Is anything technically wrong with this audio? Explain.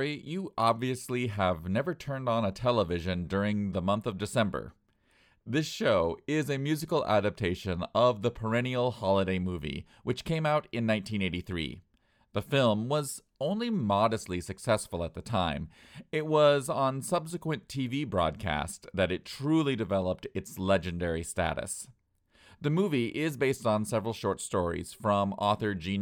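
No, nothing technically wrong.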